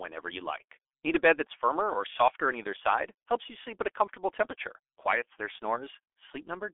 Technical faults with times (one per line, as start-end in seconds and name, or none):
0.00-6.74 G.723.1 codec